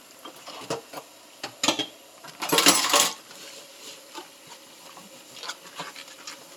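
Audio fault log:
Nothing to log here, since the sound comes through without a single technical fault to note.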